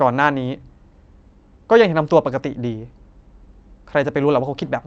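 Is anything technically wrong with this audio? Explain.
No, nothing here is technically wrong; the speech carries the ordinary character of a call path, with the top end stopping around 8 kHz, just as you'd expect.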